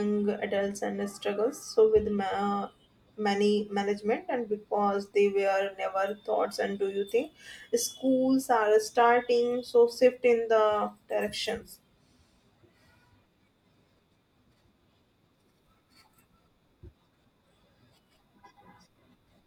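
No technical faults are audible anywhere in the speech.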